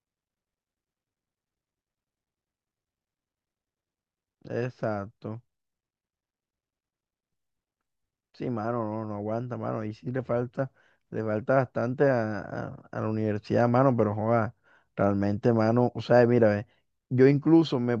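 No technical faults are audible.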